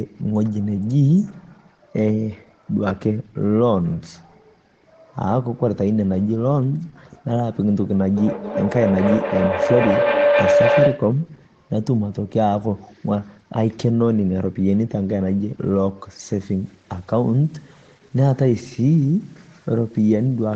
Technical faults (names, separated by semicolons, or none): feedback howl; low bit depth without dither